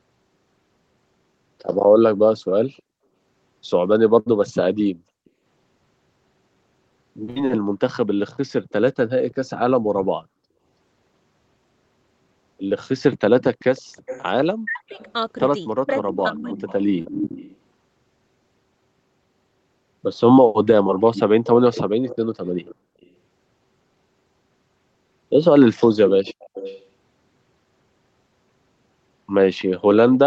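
An echo leak, likely from a loudspeaker on one side whose echo canceller let some pickup through, returns a copy of the speech about 324 ms late. It is barely audible around 2.77 to 2.82 s and 8.70 to 9.35 s, then only modestly below the talker at 13.43 to 17.56 s, 20.54 to 23.06 s and 26.08 to 26.83 s. Two bursts of packet loss at 4.19 to 4.28 s and 7.30 to 7.38 s each drop 60 ms of this speech recording. The receiver stretches the last sound for about 60 ms into a fading buzz or hiss, then jumps ahead. Short concealed packet loss at 12.68 to 12.72 s and 17.02 to 17.06 s removes 20 ms each time. The gap is patched with a synthesized continuation that blends back, leaving a brief smear or wobble. Speech suppressed in double talk between 14.61 and 16.70 s occurs while the echo overlaps, and the canceller, likely unable to separate the two, pulls the voice down. About a second in total dips or breaks up, by as much as about 40 dB at worst. 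The call's microphone path tops out at 8 kHz.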